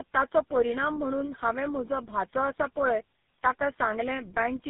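Tandem speech coding runs through the whole clip: the speech sounds as if it passed through about three low-rate speech codecs in a row, each re-encoding the previous one's damage, so it turns rough, muffled and warbly, with nothing above 3.8 kHz.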